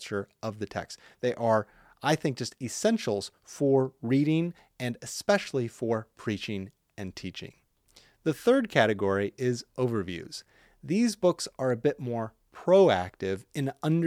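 No technical faults can be heard anywhere in this speech recording. Nothing in the audio stands out as having gone wrong at any point.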